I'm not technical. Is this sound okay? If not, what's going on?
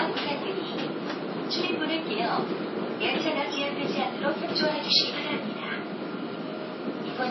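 No. MP3 compression damage runs through the whole clip, from start to finish. The sound is likely squeezed hard by an MP3 encoder that had too little room. To save space, it cut off everything above about 5.8 kHz, so the sound is dull and lacks sparkle. It also dropped quieter details, which flicker in and out and leave a watery, swirly quality, and sharp starts sound smeared instead of crisp.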